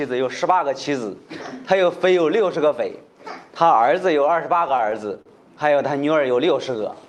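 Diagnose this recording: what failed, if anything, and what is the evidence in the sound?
Between 4.59 and 5.29 s the sound catches and drags in seven short hitches, the longest about 40 ms, each bridged by a held continuation of the preceding sound. These repeated stalls (stutter) happen at the network and jitter-buffer stage: late packets drained the buffer, and concealment filled roughly 102 ms without losing material.

From 6.71 s to the end the audio slows to 89% speed at unchanged pitch, stretching sounds. This jitter buffer slow-down, heard through the Opus call path with its 12 kHz bandwidth, added about 51 ms by repeating single pitch periods to rebuild the buffer's reserve.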